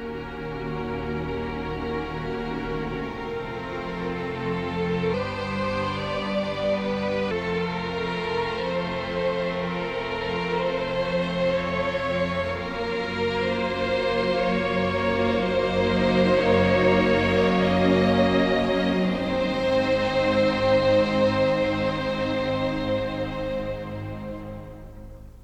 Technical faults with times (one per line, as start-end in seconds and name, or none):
5.14-7.31 section at the wrong speed